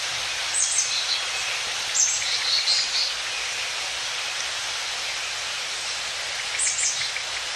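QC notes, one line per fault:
Throughout: MP2 compression, likely the cause of the dull, granular gurgle. Starved upper sub-bands switch on and off, a steady texture consistent with roughly 80 kbps, not sudden bursts.
1.53–1.90 s and 5.90–6.56 s: DAB burbling. Bit errors slipping past error correction put short blips of noise into single sub-bands.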